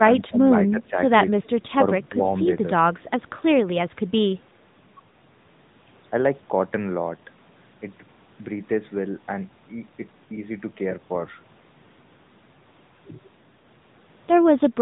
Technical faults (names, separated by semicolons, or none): AMR narrowband mobile codec